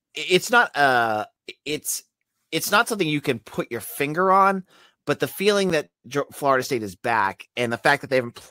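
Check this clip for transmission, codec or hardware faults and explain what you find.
There's one fault in the speech. At 5.70 s, right after "on but the feeling", there's a block of digital silence: about 8 ms of samples drop to zero with no fade, so the hard edges come through as a single tick.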